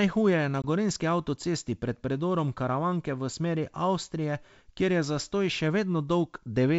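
At 0.62 to 0.65 s, a hard-edged silent hole of about 20 ms cuts the speech, which returns briefly unsettled. This is packet loss on an ADPCM call: roughly one packet went missing, leaving the decoder's predictor and step size out of step.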